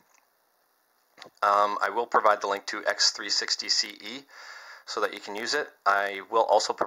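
No technical faults can be heard at any point in the audio, which keeps a steady, continuous signal throughout.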